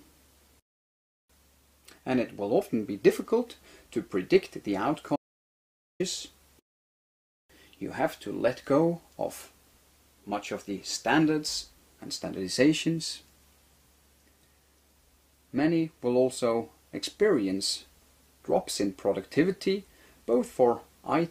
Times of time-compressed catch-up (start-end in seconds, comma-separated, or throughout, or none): none